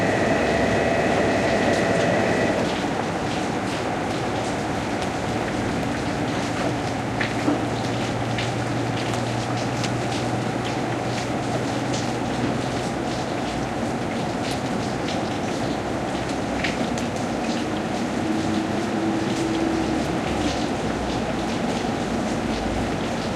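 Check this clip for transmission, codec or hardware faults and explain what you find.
No transmission, codec or hardware faults can be heard in these sounds; the signal stays intact and consistent throughout.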